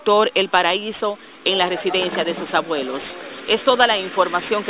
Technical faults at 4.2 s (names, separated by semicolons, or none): none